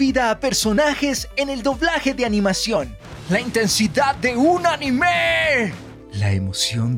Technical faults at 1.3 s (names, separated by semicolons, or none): none